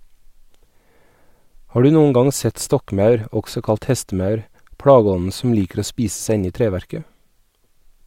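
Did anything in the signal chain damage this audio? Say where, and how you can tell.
No, nothing in the chain damaged it.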